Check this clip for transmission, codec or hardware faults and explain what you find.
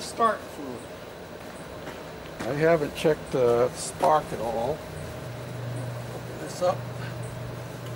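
Nothing in the signal points to a transmission, codec or hardware fault; it stays continuous and intact across the whole recording.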